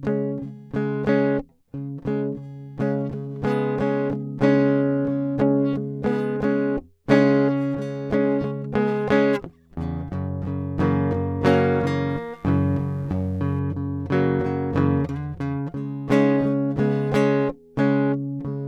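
A steady, raspy mains buzz sits under this music from 12.09 to 13.59 s, quiet and well below the music. Switching spikes at twice the 50 Hz mains rate leak in and spread harmonics into the kilohertz range.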